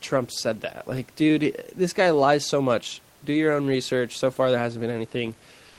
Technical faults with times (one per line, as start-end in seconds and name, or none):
5.67-5.79 comfort noise in place of the background